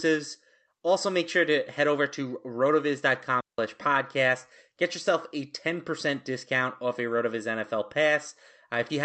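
A digital wireless dropout cuts this speech clip from 3.41 to 3.59 s: the receiver lost too much of the link's data and muted for about 179 ms, leaving a clean hole of near silence with no noise burst either side. The speech arrives through a call codec, heard as band-limited to about 8 kHz.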